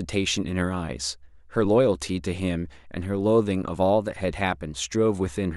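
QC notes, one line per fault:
1.33–5.51 s, clock drift buffer slips: a regular tick cuts into the speech about every 1.39 s, roughly four times in all, each a tiny discontinuity rather than a gap. The steady spacing likely comes from two devices running on separate clocks about 150 ppm apart, so the buffer between them slowly drifts until a handful of samples is dropped or repeated, leaving a small waveform jump heard as a click.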